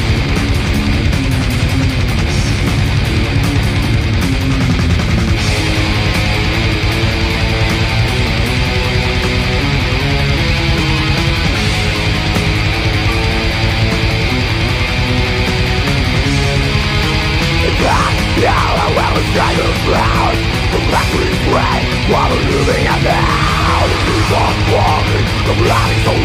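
Sample clock jitter runs through the whole clip: the converter's timing wanders by a microsecond or two, so steep, loud, bright passages pick up a faint hiss roughly 40 dB down. A spectrogram shows a diffuse noise haze tracking high-frequency energy, gone in quiet gaps.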